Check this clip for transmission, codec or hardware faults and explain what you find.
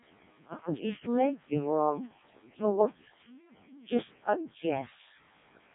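The speech has been through the Codec 2 vocoder for the whole clip, and the damage is heavy. Rather than carrying the waveform, this codec transmits only pitch, voicing, energy and a coarse spectral envelope, and the decoder rebuilds the voice from summed sine waves. The result is robotic and buzzy, and the harshness points to its lowest mode, near 0.7 kbit/s. On a spectrogram, nothing appears above 3.8 kHz and harmonics look smeared and regular. The waveform looks synthetic rather than natural.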